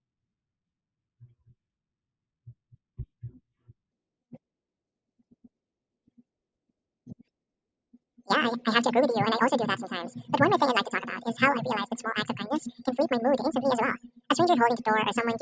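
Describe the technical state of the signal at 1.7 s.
At 1.7 s the speech signal is intact, with no audible fault at that point.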